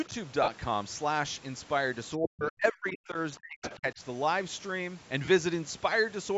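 Speech here, carried over a Bluetooth LE Audio call link, with audio topping out around 8 kHz, and it has a few dropouts and some echo-canceller trouble. First, lost LE Audio frames: at 0.43–0.48 s (about 45 ms), briefly at 2.60 s, and at 5.25–5.28 s (about 30 ms). When packets go missing, the LC3 decoder papers over the gap by replaying the last good spectrum with scrambled signs and fading it. So each gap turns into a short noisy smear rather than clean silence. The lengths fit runs of roughly six, two and four 7.5 ms frames. Second, the speech gets suppressed in double talk from 2.17 to 3.18 s, around a second of it, and again from 3.38 to 4.01 s, about 400 ms in all. The level dips sharply, by about 40 dB at its worst, so the talker sounds chopped down or knocked out in pieces. That's most likely the echo canceller panicking while both ends talk at once. It can't tell its own talker from the loudspeaker echo, so it turns everything down. 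Third, there's the other side's voice leaking through at 3.62–3.78 s. It's a brief scrap of a second voice, roughly 10 dB under the talker, sitting right inside that second suppression stretch. It's likely residual echo that the canceller failed to strip from the microphone signal.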